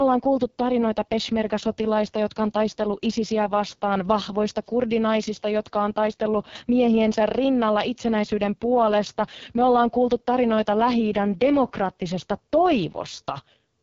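Throughout, the speech carries AMR wideband (HD Voice) codec damage: heavy, raspy roughness that fits the lowest 6.6 kbit/s mode, and nothing above 7.4 kHz.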